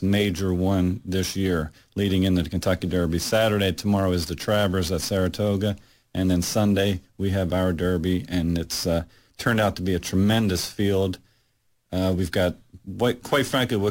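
Speech recording with sample clock jitter present throughout. The converter's timing wanders by something on the order of ten microseconds, so each sample lands slightly off its proper instant, and the resulting amplitude error tracks the waveform's slope. The result is a grainy hiss riding on the voice, sitting roughly 20 dB below the signal, strongest on loud passages and sibilant, high-frequency content, and dropping away in the pauses between phrases.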